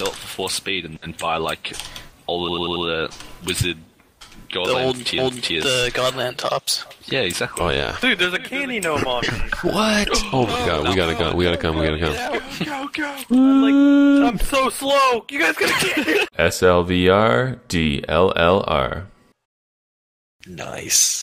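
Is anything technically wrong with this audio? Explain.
Yes, there are two bursts of repeated frames. From 2.49 to 2.86 s, a block of about 93 ms, which fits a single compressed frame, plays four extra times, giving a rapid stutter. From 5.18 to 5.55 s, a 372 ms block, consistent with four frames, plays once more, so that stretch is heard twice. Each adds 372 ms. On a waveform or spectrogram, identical segments sit side by side like copied tiles.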